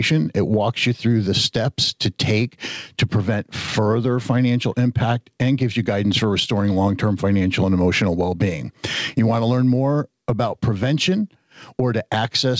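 All the way through, there's gain pumping: the level ducks by something like 10 dB under each loud moment. That's likely a far too hot input being reined in by a fast limiter, which leaves everything squashed, all on top of a call-style band that stops at 8 kHz.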